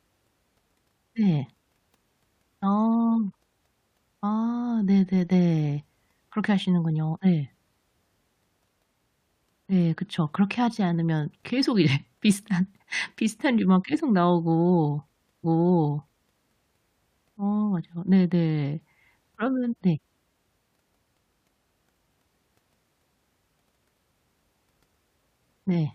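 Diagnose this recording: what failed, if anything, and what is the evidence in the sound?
The fault is at the streaming playback stage, a stream segment repeated. From 15.43 s to 16.43 s about one second of speech plays a second time, with a small blip where playback jumps back. The player fetched or queued the same segment twice. On a spectrogram the same block of patterns appears twice in a row, split by a thin vertical click line at 15.43 s.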